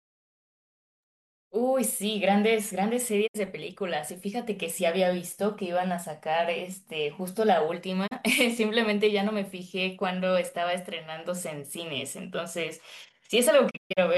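At 3.26 to 3.36 s, 8.06 to 8.13 s and 13.69 to 13.99 s the speech mutes in a digital broadcast dropout. Corrupt frames make the receiver fade to silence within 20 ms. The gaps fit 32 ms frames, and the last one breaks into several short holes.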